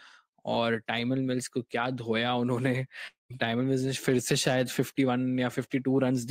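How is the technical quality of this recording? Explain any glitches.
There's one clear glitch in the speech, a long network dropout from about 3.07 to 3.31 s. Audio likely stopped arriving, so the receiver stretched the last sound into a fading buzz, then roughly 160 ms of near silence. It resumes with about 230 ms of speech gone for good.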